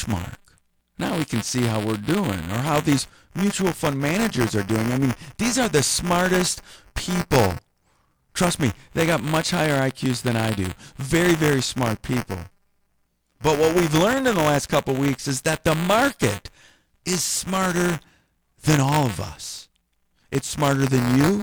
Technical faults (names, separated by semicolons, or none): buffer tearing